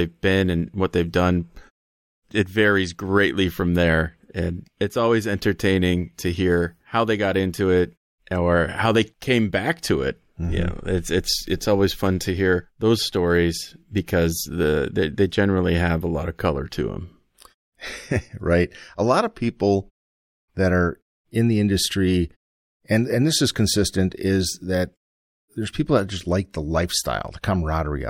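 No technical faults are audible.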